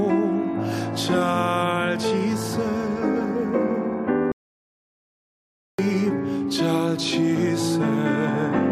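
A playback stall runs from 4.32 to 5.79 s: the audio cuts out mid-flow and stays silent for about 1.47 s before sound returns. The likely cause is the player running out of buffered data or its output thread being blocked until it recovered.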